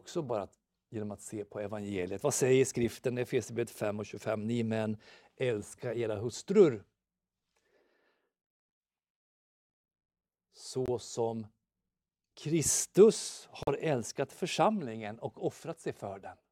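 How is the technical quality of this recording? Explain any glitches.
Two brief silences cut into the speech, both from corrupt frame muting. At 10.86 to 10.89 s and again at 13.63 to 13.68 s, just before "älskat församlingen och", the sound drops to nothing abruptly for roughly 36 and 52 ms. Damaged compressed frames were rejected by the decoder and replaced with silence; each gap fits two lost frames. Unlike a buffer dropout, nothing is delayed or stretched: the speech resumes exactly on time after each hole.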